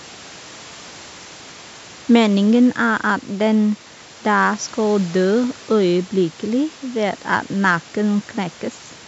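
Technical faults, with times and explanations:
No technical faults turn up here; what you hear is just a call's normal microphone processing, with nothing above 8 kHz, plus some room noise sitting about 26 dB below the speech.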